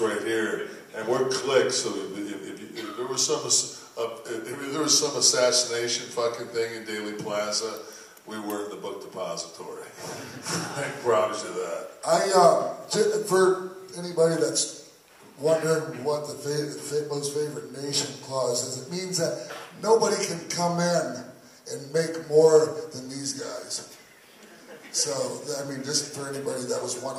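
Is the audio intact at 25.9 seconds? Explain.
Yes, the audio is intact at 25.9 seconds, with no dropout, glitch or other fault audible at that point.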